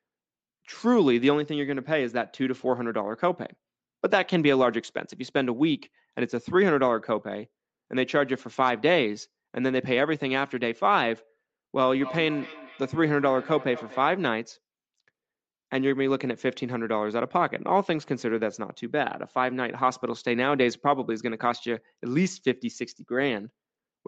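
A speech recording with a feedback echo between two devices from 11.98 to 14.23 s. Each sound returns roughly every fifth of a second, at most about 16 dB below the speech, thinner and more ringing on each pass. The likely cause is one device's loudspeaker feeding another device's microphone, which its own echo canceller cannot remove. On a spectrogram, faint evenly spaced copies trail each syllable, and the call path's 8 kHz ceiling forms a flat upper edge.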